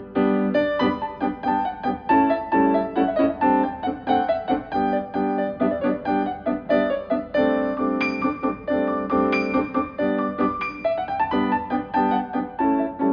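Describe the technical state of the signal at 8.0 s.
Around 8.0 s the signal is intact, with no audible technical fault at that moment.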